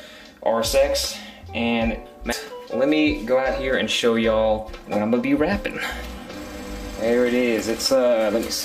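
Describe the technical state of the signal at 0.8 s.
At 0.8 s the signal is intact, with no audible dropout, distortion, clicks or other fault.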